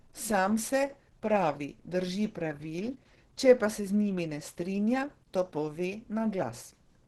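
From start to end the speech sounds muffled and hoarse, with a rough, grainy edge and a top end that stops short. That's likely Opus compression at a very low rate, something like 12 kbps, running its hybrid speech mode with a super-wideband ceiling.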